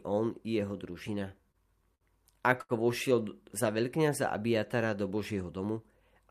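Right after "on i jeho", from 1.07 to 2.04 s, the speech falls into repeated stalls (stutter). Packets kept arriving late, so the jitter buffer emptied seven times, and the receiver held the last sound to fill about 134 ms, the longest gap 60 ms. Nothing is lost, but the speech lurches and drags. A spectrogram shows seven short stretches of frozen, smeared harmonics, and the waveform has flattened or fading repeats between normal stretches.

From 2.61 to 2.72 s there is a short stall from a late packet. One packet missed its playout time, and the receiver stretched the preceding sound by 82 ms until it arrived, then resumed where it had stopped. A sound is held too long. It appears as a single band of unchanging harmonics and a repetitive waveform stretch.

Between 5.10 and 5.65 s, a jitter buffer speed-up plays the speech at 109% of its normal rate to drain excess buffered delay, trimming roughly 70 ms in short pieces of one or a few pitch periods. 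Pitch stays the same, but the delivery sounds hurried. A spectrogram shows compressed syllables with unchanged harmonic spacing.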